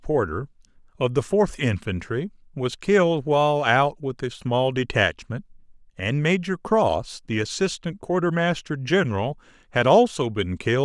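No technical faults turn up anywhere in this speech recording.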